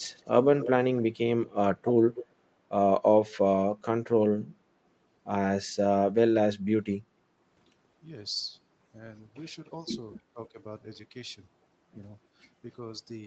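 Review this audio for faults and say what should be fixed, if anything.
From 0.02 to 0.3 s a very faint copy of the speech trails it by 291 ms. This is an echo leak, likely from a loudspeaker at the far end whose echo canceller let part of the signal through. On a spectrogram it shows as a weak, right-shifted ghost of the same harmonics. To prevent it, have the far end use a headset or tune its echo canceller to converge at call start.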